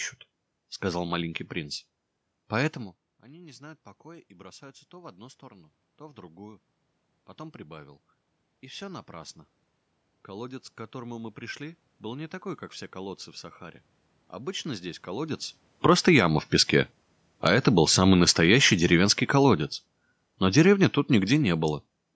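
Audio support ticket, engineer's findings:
Automatic gain rising, 2.9 to 18.9 s: talker drops back around 2.5 s, input falls about 22 dB, AGC slowly pulls gain up about 8 dB. Voice and room noise swell together over many seconds. Component: call mic AGC.

Automatic gain falling, 15.7 to 22.0 s: talker moves around 15 s, AGC eases gain down about 11 dB. Speech and background sink together to the end. Same AGC, now chasing a louder input or strong background noise. Mic path's band limit (nothing above 8 kHz) is normal.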